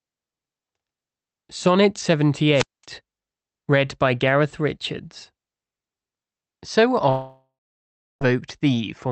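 At 2.53 s a wireless microphone squelch dropout occurs: hiss rises as the analogue FM signal fades, the receiver's squelch mutes the output for about 220 ms, and the speech returns by 2.85 s.

From 7.09 s to 8.23 s the speech breaks up in a pattern that points to a likely long network dropout. About 1.1 s of audio is lost, and the receiver fills the gap by extending the last sound as a fading buzz or hiss. Around 680 ms of that gap is plain silence before speech resumes. The call path band-limits the audio at 8 kHz, with coding noise consistent with Opus at roughly 32 kbps.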